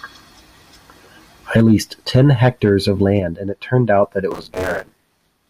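Speech, with buffer tearing from 4.31 s to the end: a steady 100 Hz robotic rattle, fitting a 10 ms buffer, as roughly half of each buffer replays audio from a few tens of milliseconds earlier. Unlike dropouts, there are no silent gaps, and the buzz follows the signal.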